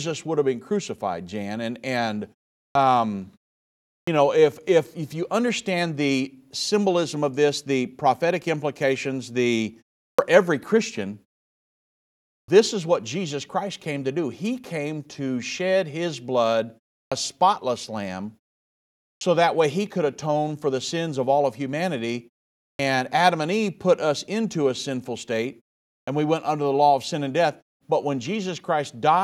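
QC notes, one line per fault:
2.71, 4.03, 10.14, 12.44, 17.07, 19.17, 22.75, 26.03 s: clipped start after a pause. The output device sleeps through 0.36 to 1.27 s of silence and wakes late, swallowing 41 to 45 ms, so speech bursts in abruptly.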